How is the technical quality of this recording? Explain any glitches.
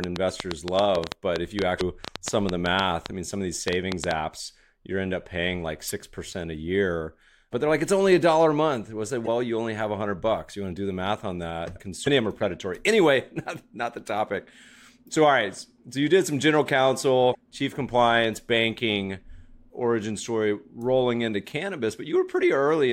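The recording has two distinct problems: a burst of ticking at the start and five short digital blips spread through the speech.

From 0.04 to 4.12 s there is a train of clicks: about thirty sharp ticks at an uneven pace averaging about 6.5 per second, peaking roughly 20 dB above the speech and audible in pauses too. The likely cause is electrical interference or a faulty connection or power supply injecting near-identical pulses. What sets them apart from the blips is that they repeat with much the same shape.

Damaged data in a compressed stream causes the other five glitches, at 1.77–1.81 s, 5.87–5.91 s, 9.26–9.28 s just before "you only have", 12.03–12.07 s between "the math on that" and "of them are predatory", and 17.31–17.35 s just before "chief compliance banking origin". In each, the decoder hit corrupted frames, lost sync and hunted for the next valid header, producing a brief glitch in the speech.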